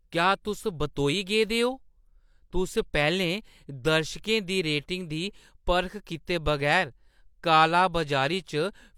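No technical faults can be heard anywhere in the speech recording.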